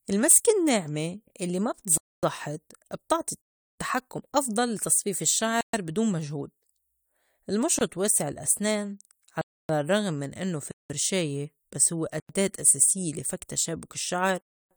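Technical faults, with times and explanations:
1.98–2.23, 3.41–3.78, 5.61–5.73, 7.79–7.81, 9.41–9.69, 10.71–10.90, 12.20–12.29, 14.41–14.71 s, block of digital silence: the speech cuts out and back abruptly, without any fade, leaving holes from 23 ms up to about 370 ms. This probably happens because the output buffer wasn't filled in time, which fits buffer-sized dropouts, though an invalid calculation could also do it.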